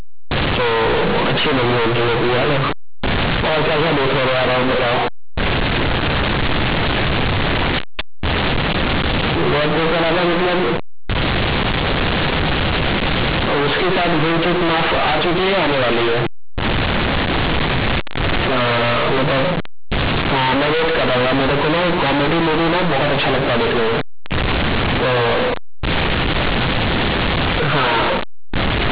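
From start to end, A-law bytes are read as linear 8-bit samples without expansion, so the speech is loud, harshly buzzy and distorted, with heavy noise in pauses.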